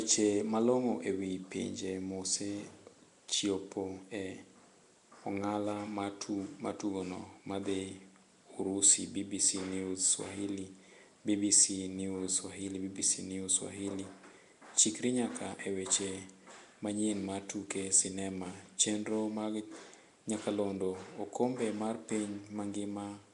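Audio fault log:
Throughout – Nellymoser compression: the speech carries a rough, hissy halo and a smeared, underwater quality, with plainly audible damage and nothing above 10.6 kHz. This is likely the Nellymoser Asao codec from Flash, which codes short blocks at a fixed bit depth per sample. Bands too weak to earn bits are filled with noise, producing the hiss. The damage level suggests a bitrate of about 44 kbps.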